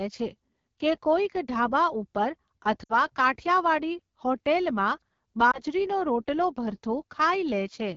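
AMR wideband (HD Voice) coding runs through the whole speech clip. The codec models speech up to 6.4 kHz with a pulse-excited vocal tract filter and fills the band above that with shaped noise. The damage is plainly audible as a rough, raspy grain. This texture fits one of the lowest AMR-WB modes, around 8.85 kbit/s, where too few bits carry the excitation to keep the sound smooth.

Lost AMR speech frames occur twice. From 2.83 to 2.94 s, about 60 ms of sound is missing, which fits a run of three 20 ms frames. The decoder repeats the last good pitch and vocal tract settings with shrinking gain, so the sound smears briefly and sags before resuming roughly. At 5.51 to 5.62 s a single concealed frame, about 20 ms, gives only a short dip or warble.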